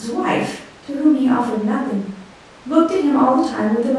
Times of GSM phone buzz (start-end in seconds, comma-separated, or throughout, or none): none